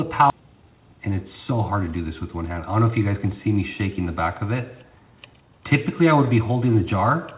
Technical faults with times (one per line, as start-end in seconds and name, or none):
0.30-0.32 skip ahead
0.39-5.55 jitter buffer speed-up